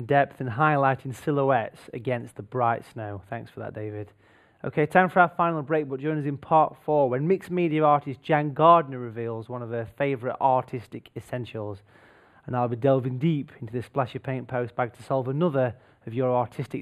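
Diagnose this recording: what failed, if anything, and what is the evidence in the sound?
Channel delay (comb filtering) runs through the whole recording, leaving the sound hollow and dull at the top. A few samples of skew, around 0.1 ms, between channels at the converter or driver stage, summed to mono, cancels shared content in evenly spaced notches starting near 5 kHz.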